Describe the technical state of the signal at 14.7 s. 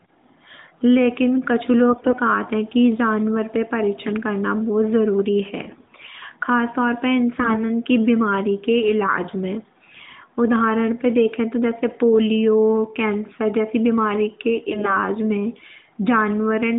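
At 14.7 s the speech has AMR bit errors, running from 14.70 to 14.99 s. Over a weak link, roughly 7 percent of the less protected bits arrived flipped while the core checksum still passed, so the decoder drove its vocal-tract model with misplaced pulses and wrong gain and spectral values. Pitch and loudness hold, but the voice turns hoarse, scratchy and gargly within the narrowband 150 Hz to 3.7 kHz line. Lost frames would instead produce gaps or smeared repeats.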